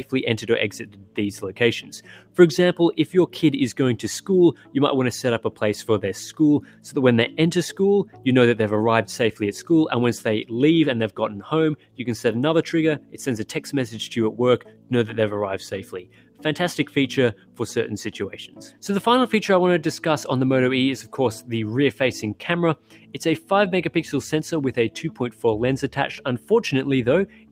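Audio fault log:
Throughout: noise suppressor applied to music or sounds. A speech-oriented suppressor is running over the whole clip and keeps mistaking sustained parts of the sound for background noise, pulling them down while sharp onsets mostly slip past. Gain swings by roughly 10 dB, so the level pumps and the body of held material keeps thinning, giving the clip an unsteady, breathing quality.
0.04–2.38 s, 4.21–9.4 s, 11.1–18.83 s, 21.03–23.51 s, 25.1 s to the end: sound cut by the noise suppressor. In each span the suppressor clamps down on steady or decaying sound, with dips reaching about 11 to 12 dB. Tails get chopped short and sustains sag while transients still poke through. The cuts add up to around a second in each of the first two spans, about two seconds in the third, and under a second in the fourth.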